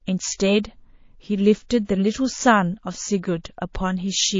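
Throughout, the speech sounds watery and swirly, with dull treble and smeared attacks, likely MP3 compression at a bitrate as low as 32 kbps.

From 1.84 to 1.89 s, a 47 ms hiss, about 25 dB above its surroundings, precedes an attack: pre-echo, where noise spreads across a long block of about 72 ms.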